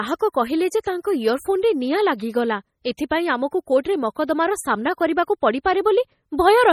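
Throughout the speech, heavy MP3 compression artefacts are likely: watery, swirling texture and nothing above 18.7 kHz, which fits a starved bitrate around 32 kbps. At 2.97 s, pre-echo: codec noise spreads about 15 ms ahead of a sharp onset, giving a brief hiss before the attack and softening it.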